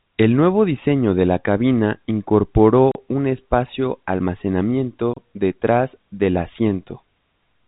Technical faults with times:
2.91-2.95 block of digital silence
5.14-5.17 block of digital silence

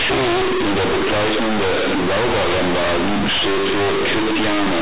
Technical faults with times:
0.00-4.81 companded audio read as linear

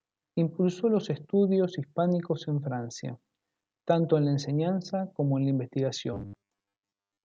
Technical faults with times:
6.13-7.24 robotic sound from repeated short buffers

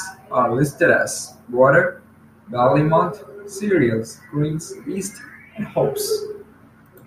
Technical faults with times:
none

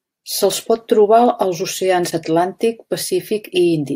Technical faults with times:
none

